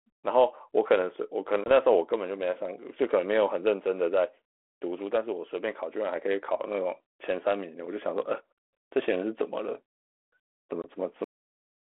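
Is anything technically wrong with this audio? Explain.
Yes, two kinds of fault are audible on this G.726 ADPCM phone-band speech, whose light codec damage and 300 Hz to 3.4 kHz band fit a 32 kbit/s DECT-style link.

Packet loss on an ADPCM call occurs at 1.64 s and at 10.82 s. Each time about 20 ms, roughly one packet, drops to silence, and the decoder's predictor and step size lose track of the sender's. After each hard-edged gap the speech returns slightly distorted, settling by about 1.71 s and 10.86 s.

A cut-off end occurs at 11.24 s. The final buffers were never written or played, so the speech stops mid-sound and falls straight to digital silence, with no decay, for the remaining two-thirds of a second.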